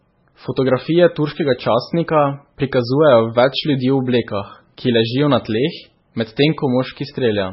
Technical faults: MP3 compression

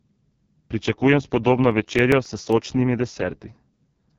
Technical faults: AMR wideband (HD Voice) codec; CD scratch ticks

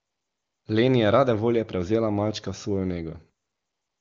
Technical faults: AMR comfort noise

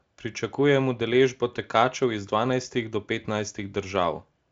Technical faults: none

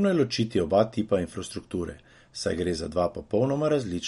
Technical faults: MP3 compression

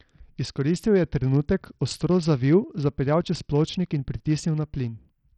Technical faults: Bluetooth SBC compression

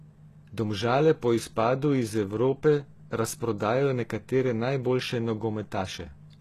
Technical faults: HE-AAC compression

